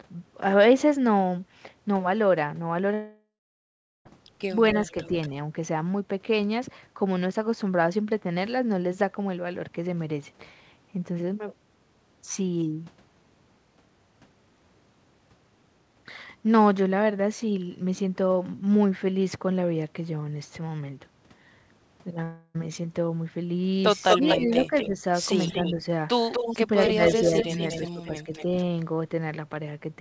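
Speech over a call path (the G.722 codec means nothing is heard above 8 kHz), and a few things go wrong. From 2.94 to 4.07 s about 1.1 s of audio is lost: the concealment fill fades out and leaves roughly 0.76 s of silence before the sound returns. At 22.23 to 22.56 s a shorter 0.32 s gap is papered over with fill the whole way. Both are likely long network dropouts. There's also a delayed copy of the talker arriving about 0.24 s late. It shows up at 4.52 to 5.28 s (about 15 dB down), at 24.09 to 24.90 s (roughly as loud as the speech itself), at 25.38 to 25.74 s (about 10 dB down) and at 26.32 to 28.63 s (about 5 dB down). That's an echo leak, likely from a far-end loudspeaker whose canceller let it through. Right where that echo overlaps the talker, the near speech gets ducked. It dips about 10 dB across 24.15 to 25.01 s, about 5 dB briefly at 25.77 to 25.84 s, and up to about 15 dB over 26.50 to 28.32 s. 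That's likely speech suppressed in double talk.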